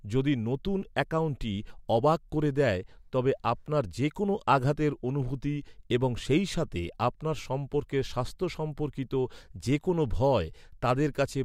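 No technical faults are audible.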